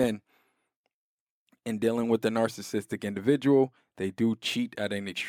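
No technical faults can be heard anywhere in this speech recording. There is nothing here that needs a timestamp or further comment.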